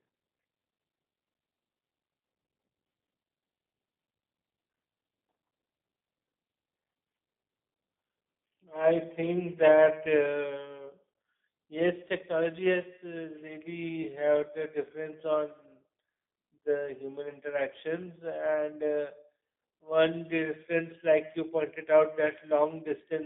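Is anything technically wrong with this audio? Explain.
Yes. G.729 codec damage runs throughout: the speech is rebuilt from a vocal-tract filter and pitch pulses, consistent with 8 kbit/s coding, leaving a rough, synthetic quality with nothing above 3.7 kHz.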